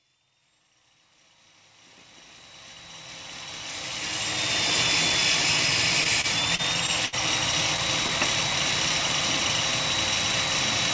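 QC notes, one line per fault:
6.04 to 7.15 s, repeated stalls (stutter): five short hiccups where playback ran dry and held onto the last sound, longest about 68 ms, so it drags without losing anything.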